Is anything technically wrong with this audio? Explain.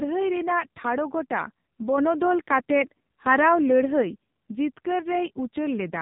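Yes. AMR narrowband mobile codec damage runs throughout: heavy coding, consistent with a low rate around 5.9 kbps, reduces the voice to a vocal-tract model driven by sparse pulses, so it sounds buzzy and synthetic, with nothing above 3.8 kHz, leaving it thin and muffled.

A sudden gain jump lifts the level by about 4 dB at 1.98 s and drops it back at 4.02 s. Voice and background step together with no ramp, most likely from a gain setting applied instantly.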